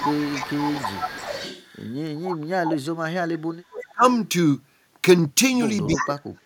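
Echo leak runs from 0.0 to 2.77 s: a copy of the speech trails the original by 318 ms, about 10 dB below it. Most likely the far end is playing the call over a loudspeaker and its echo canceller is passing some of what its microphone catches back down the line. Within that stretch, speech suppressed in double talk affects 0.02 to 0.58 s. The talker dips by roughly 15 dB for about half a second, likely because the canceller mistook the overlapping talk for echo and turned it down. The same suppression returns harder from 3.4 to 4.03 s, with drops near 40 dB that nearly mute the speech in places, and a short, faint echo leak at about 20 dB down slips through between 3.81 and 3.92 s, likely from the same unremoved loudspeaker pickup. Near the end, an echo leak from 5.95 to 6.08 s is strong, only about 5 dB under the speech and again 318 ms late, while speech suppressed in double talk from 5.96 s to the end cuts the talker by roughly 40 dB, likely the canceller again clamping down during overlap.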